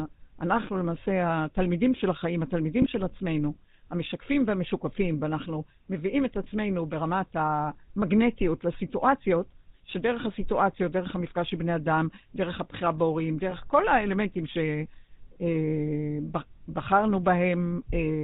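The whole recording has a buzzy, gravelly roughness and no content above 4 kHz. This points to the GSM full-rate codec at around 13 kbps, with the voice resynthesised from sparse pulses.

At 2.82 to 2.86 s and again at 13.50 to 13.53 s, the sound briefly smears into a short metallic ring. This comes from lost GSM frames, each fitting a single 20 ms frame that was filled by repeating the previous one.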